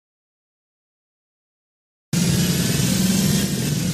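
The input feed was likely lost for a spell, through a disconnected device, a failed link or a stray mute, while recording carried on writing silence. The audio dropout to silence is already under way when the clip begins and lasts until 2.13 s. For those first two seconds there is dead silence with no room tone at all, and then the sound enters abruptly in mid-flow, with whatever came before it missing.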